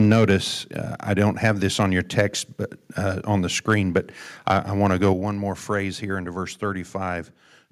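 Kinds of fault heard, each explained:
Microphone overload: loud syllables crackle harshly, with peaks overshooting by about 2 to 4 dB, likely from input volume set so high the converter clips their tops.
Microphone volume stepped down: the level drops abruptly, by about 3 dB at 0.12 s and about 6 dB at 5.13 s, likely software lowering microphone input after clipping.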